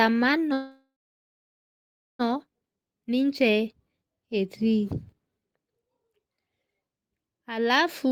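A speech clip with a call audio freeze followed much later by a jitter buffer speed-up. From 0.53 s to 2.21 s the sound stalls: the last fragment is stretched into a fading buzz that thins to silence for about 1.3 s of the 1.66 s gap. When the sound returns it picks up exactly where it stopped, so nothing is lost. That is what separates this from a dropout, which would skip sound. The likely cause is delayed packets draining the jitter buffer, which leaves playback 1.66 s further behind. In the speed-up at 8.05 s to 8.11 s, tiny pitch-period slices totalling about 50 ms are cut out, so the sound briefly runs at 167% speed and feels hurried. Unlike a resampling or playback-rate error, the pitch stays unchanged, because whole periods are removed rather than the waveform being squeezed.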